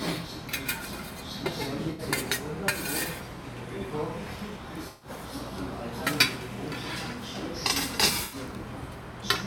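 A recording of everyday sounds with AAC frame loss with concealment at 1.90–2.02 s, 4.89–5.10 s and 8.24–8.36 s, where the decoder rebuilds missing blocks from the last good spectrum, leaving short smeared, phasey patches. The gaps of about 85, 128 and 85 ms fit four, six and four dropped frames.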